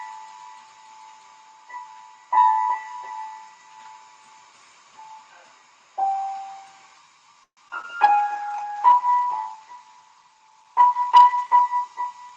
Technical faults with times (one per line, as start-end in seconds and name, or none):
7.43-7.85 repeated packet loss (robotic sound)
8.09-8.34 jitter buffer slow-down
8.36-12.37 call bitrate drop